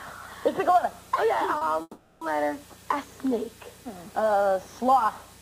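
At 1.57 to 1.63 s there is a short concealed packet loss: about 40 ms of audio arrived too late to decode, and the receiver bridged the gap by extending the preceding sound before blending back, leaving a brief smear or wobble.

From 1.81 to 2.23 s the sound turns into a continuation of what came before, a buzz or hiss that fades over roughly 0.4 s and then drops to about 20 ms of silence before the audio resumes, with the intervening material absent. This is likely a long network dropout, with the receiver concealing the gap until it ran out.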